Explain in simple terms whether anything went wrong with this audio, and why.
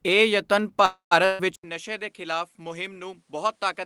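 Three separate problems occur within the first two seconds of this speech clip.

Just after "ਇਹ ਯਤਨ", from 0.85 to 1.13 s, there is a call audio freeze. The last sound is stretched into a fading buzz or hiss, and for about the final 0.12 s it goes silent. The likely cause is that network packets were held up and the receiver's buffer ran dry while it waited. When the audio resumes, nothing has been lost. The rest of the speech simply arrives about a quarter of a second late.

Shortly after, from 1.25 to 1.41 s and still following "ਇਹ ਯਤਨ", there is a burst of packet loss. This time roughly 0.14 s of audio never arrived in time to be played. The receiver covered the hole by extending the last sound and fading it down. When the speech picks up again, that stretch of audio is simply missing, so the listener hears a small jump forward.

At 1.56 s the input switched to a poorer device, and the sound stays that way until the end. 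There is a brief gap of about 0.08 s at the change. After it, the audio is noticeably quieter and duller, with nothing above about 11.4 kHz, and a faint new background noise sits underneath. This is likely the system changing to a different microphone or headset in the middle of the recording.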